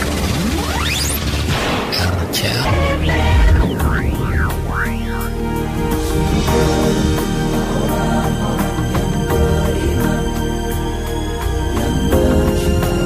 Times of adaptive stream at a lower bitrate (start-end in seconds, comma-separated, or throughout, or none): none